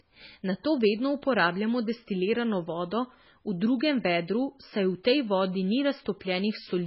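Speech throughout carries heavy damage consistent with MP3 compression at a very low bitrate, likely around 16 kbps: nothing sounds above 5.6 kHz, sibilants lose their edge, and weak detail flickers frame to frame, giving a watery, swirling texture with smeared consonant attacks.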